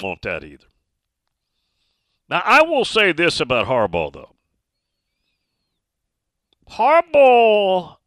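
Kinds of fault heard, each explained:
No faults detected anywhere in the speech.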